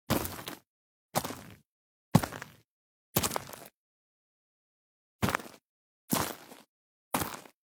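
A stream segment skipped at about 7.10 to 7.15 s: the sound jumps abruptly forward with a brief blip, as if a stretch is missing. The likely cause is one segment of a segmented stream failing to load, so playback carried on with the next.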